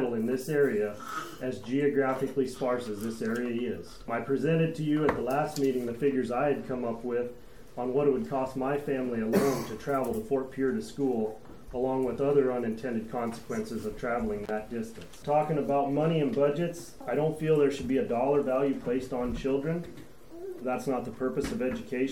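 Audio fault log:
14.43 to 14.50 s, intermittent contact: a loose connection briefly opens for about 33 ms, so the sound drops out, with crackle at each edge as the contact breaks and remakes.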